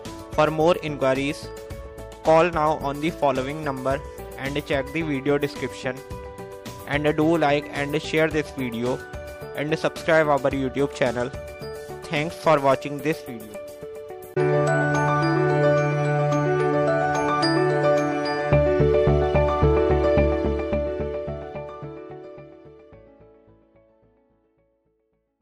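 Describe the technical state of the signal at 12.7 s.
At 12.7 s the signal is intact, with no audible faults at that moment.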